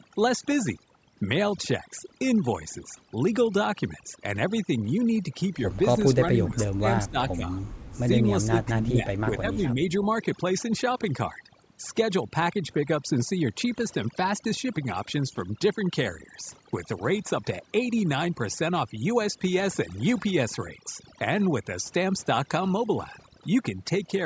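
Overdone noise removal runs through the whole speech clip. The noise reducer was set too strong. It cuts frequency bands that sit near its noise estimate, and quiet parts of the voice go with them. The background drops and breaks up into twinkling specks.

From 6.14 to 6.85 s, the voice dips in pieces, by about 25 dB at worst and for a few tenths of a second in all. This is likely speech suppressed in double talk. Both sides spoke at once, and the echo canceller turned both down. The same dipping returns from 7.07 to 7.46 s, 7.92 to 8.09 s and 8.45 to 9.8 s, each time by about 15 dB. The last is the longest, with well over half a second cut.

Between 6.58 and 6.62 s, a brief scrap of the voice comes back 388 ms late. It sits about 20 dB below the speech. This is likely an echo leak. A loudspeaker on one side fed the microphone, and the canceller let a small piece through.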